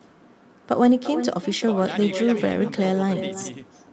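This speech clip went through an Opus call with an echo with no canceller on the far end: the loudspeaker playback leaked into the other side's microphone and nothing removed it, so the audio returns after the network round trip. Every phrase is trailed, roughly a third of a second later, by a thinner copy about 11 dB quieter. Separately, from 0.83 to 0.97 s there is a lost packet rebuilt from error correction. Several packets went missing, and the decoder filled them from low-bitrate copies carried in the following packets, which points to about 80 ms of rebuilt audio spread across that stretch. Nothing drops out there, but the sound turns briefly rougher and noisier before clearing. The call's coding keeps nothing above 8 kHz.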